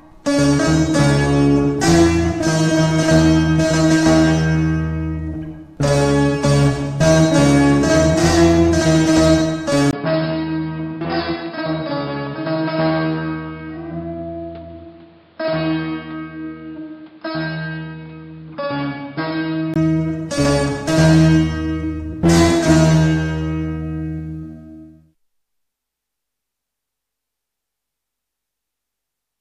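From 9.91 to 19.76 s, after a 20 ms gap, the sound loses everything above 5.2 kHz, drops roughly 10 dB and gains its own background noise. This is likely an input switched to a poorer device; a filter alone would not bring new noise.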